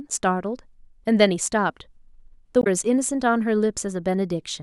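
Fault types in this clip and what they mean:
Damaged data in a compressed stream: a short stretch of the speech stream arrives corrupted, so the decoder cannot parse those frames, loses sync and hunts for the next valid header. At 2.60 s it is heard as a brief disruption lasting about 70 ms, ending near 2.67 s. On a spectrogram it shows as a narrow vertical break in the speech harmonics, and on the waveform as an abrupt discontinuity.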